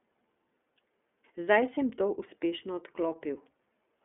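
Speech coded throughout with the iLBC codec, a narrowband VoIP coder. The audio sits in a telephone band of roughly 250 Hz to 3.5 kHz, with nothing above 3.7 kHz, so sibilants and upper harmonics are missing. The damage is plainly audible as a rough, slightly synthetic texture, because the excitation of each frame is coded independently of the previous one. The character fits 30 ms frames in the 13.33 kbps mode.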